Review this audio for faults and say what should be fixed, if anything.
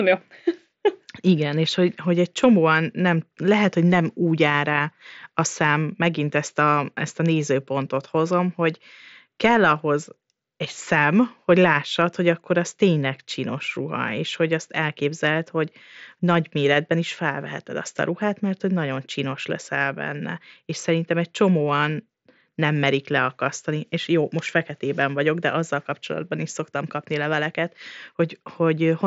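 Nothing needs to be fixed, as the review finds no faults in this speech audio.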